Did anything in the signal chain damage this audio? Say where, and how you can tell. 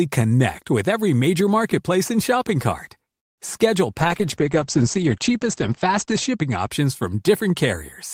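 Yes, two faults. The first is a call audio freeze at 3.19 to 3.40 s, right after "marketplace and shopping cart". The sound stops and gives way to near-silence for about 180 ms. Then it resumes exactly where it left off. Nothing is lost, but everything after it arrives about 183 ms late. That points to the network stage, likely delayed packets draining the jitter buffer.

The second is a call bitrate drop from 4.00 to 6.76 s, in the codec stage. The sound turns coarse and muffled. The encoder's rate falls from 32 kbps to 10 kbps and stays at the bottom for about 2.3 s. Bandwidth shrinks from 20 kHz to 8 kHz, so the top end vanishes. Fewer bits mean rougher quantisation. This follows a falling bandwidth estimate in the call.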